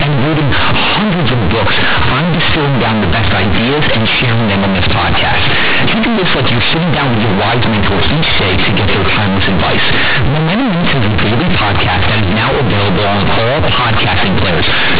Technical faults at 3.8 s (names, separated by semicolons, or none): companded audio read as linear